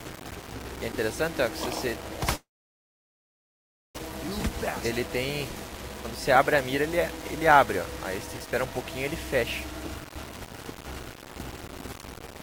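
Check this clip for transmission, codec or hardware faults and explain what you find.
Three faults are audible: coarse quantisation throughout, one long gap, and two hurried passages.

Low bit depth without dither, throughout: grainy distortion that tracks the sound, with error about 15 dB below the signal. The likely cause is rounding to 6 bits.

Long network dropout, 2.35 to 3.99 s: a short fading buzz, then about 1.5 s of silence. Audio was likely lost in transit, and about 1 s never returns.

Jitter buffer speed-up, 6.35 to 6.98 s and 9.99 to 10.73 s: pitch-period slices are cut to shed backlog. The sound runs 109% fast (about 70 ms removed), then 145% (about 300 ms), and the second passage sounds clearly rushed.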